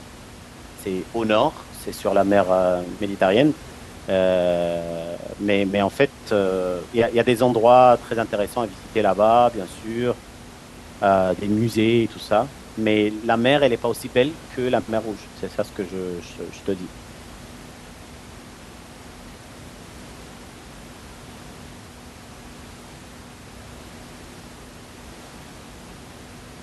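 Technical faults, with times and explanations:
Nothing stood out on listening to the speech, with only the room's own background noise sitting about 21 dB beneath it.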